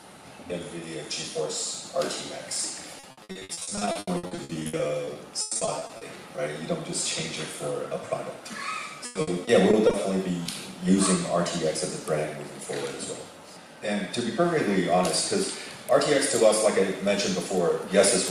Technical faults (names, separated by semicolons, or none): repeated packet loss (robotic sound); short concealed packet loss